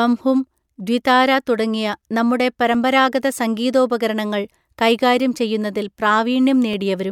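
A speech recording with periodic USB or driver dropouts: ticks recur every 2.0 s from 0.75 s to 6.73 s, about four in all. At each one, something blocks the USB bus or audio driver and roughly half a millisecond of samples is skipped outright, so the waveform jumps rather than falling silent. The strict two-second spacing is what sets this apart from random clicks or network packet loss, whose gaps fall irregularly and are often longer.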